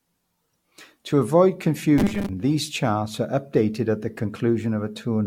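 Throughout, the speech sounds swirly and hollow with blurred consonant attacks and nothing above 17 kHz, likely generation loss from roughly seven AAC-LC passes at about 96 kbit/s.

From 1.98 to 2.29 s, just before "these charts are", a rigid metallic buzz at 200 Hz appears. This is robotic sound from repeated short buffers, likely a 5 ms block looped while roughly half the audio is skipped.

At 3.75 s, between "these charts are" and "at the", a sharp snap sits on top of the speech, likely an electrical switching spike picked up on the line.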